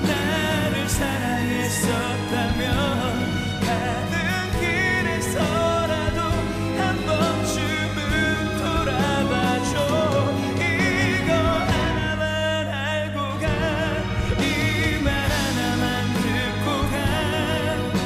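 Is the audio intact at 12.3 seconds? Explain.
No. Mains hum runs through the whole clip, including 12.3 seconds. A ground loop or nearby transformer is leaking the power line into the signal. It sounds like a steady low 50 Hz drone with some low harmonics, nearly as loud as the sound itself.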